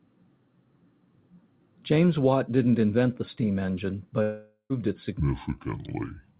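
From 4.22 to 4.73 s there is a gap of about 0.48 s, most likely a long network dropout. The receiver stretches the last sound into a fading buzz for most of that span. About 50 ms of silence follows before the audio resumes with the missing portion gone.

From 5.2 s to the end, the section plays at the wrong speed, at 0.64 times normal, probably through a clock mismatch in playback. Pitch and tempo drop together, about seven semitones down, so the sound turns deep and sluggish within the narrow telephone band.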